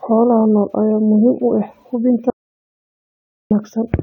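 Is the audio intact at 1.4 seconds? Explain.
Yes, at 1.4 seconds the speech runs continuously with no dropout, click, glitch or other fault to be heard.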